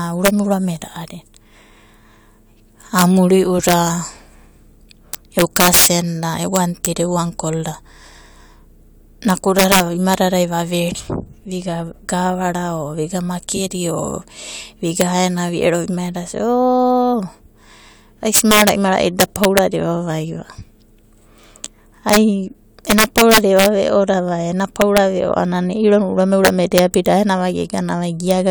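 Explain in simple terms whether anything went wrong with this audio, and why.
Yes, integer overflow: the loudest bits of speech push past the number limit and wrap to the opposite extreme, so a small fraction of peaks crack violently throughout.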